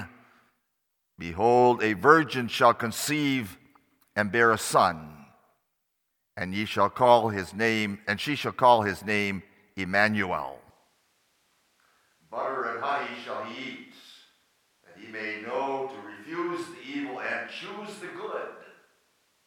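At 10.70 s the close microphone's signal is likely lost, and the recording switches to a distant microphone until the end. The speech abruptly turns roomy and hollow with thinner bass, drops about 10 dB in level, and gains room noise roughly 35 dB below the speech.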